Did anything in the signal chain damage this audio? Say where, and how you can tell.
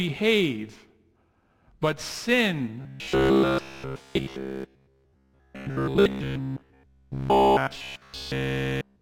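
Yes, likely a driver buffer underrun: from 2.82 s to 9.01 s, the speech becomes robotic sound from repeated short buffers. Looping roughly 15 ms chunks forces a rigid 66.8 Hz buzz.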